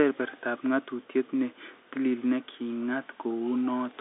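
No technical faults can be heard in the speech. It carries the narrow band of a G.711 telephone line, roughly 300 Hz to 3.7 kHz, with nothing above about 3.8 kHz.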